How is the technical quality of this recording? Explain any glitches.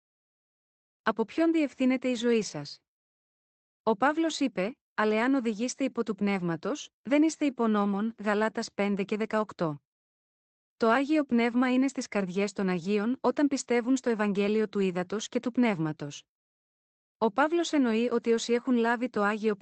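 Nothing glitchy turns up in this speech recording; it simply has the band-limited sound of a call line, topping out around 8 kHz, which fits an Opus stream at roughly 20 kbps passing through its jitter buffer the usual way.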